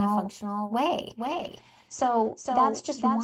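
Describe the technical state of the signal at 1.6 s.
At 1.6 s you're inside a call bitrate drop that starts at 1.24 s and runs to the end of the clip. The encoder went from 32 kbps down to 12 kbps, bottoming out for about 1.34 s, and the top end shrinks from 20 kHz to 8 kHz, so the speech sounds muffled and watery.

On top of that there's a doubled audio track: a clean second copy of the speech trails about half a second behind, a few dB quieter, with no room tail on it. That's most likely a second capture path or a misaligned edit leaving two copies in the mix.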